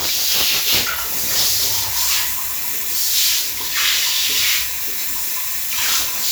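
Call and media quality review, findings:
Nothing to flag on this one: the sounds come across steady and intact, with no audible dropouts, glitches or level problems to chase down.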